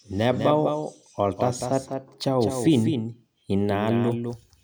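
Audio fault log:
throughout: doubled audio track. The speech is heard twice, a second full-band copy trailing by about a fifth of a second and somewhat quieter. It has no decay or room tone, so it is likely a duplicate recording path running out of step.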